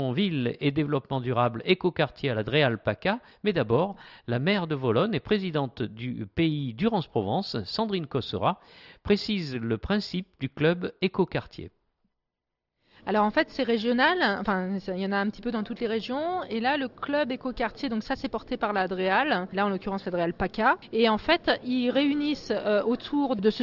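Listening through, nothing stood out as a technical fault at any point.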